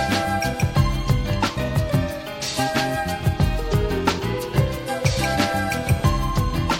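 Nothing technically wrong is audible anywhere in the audio.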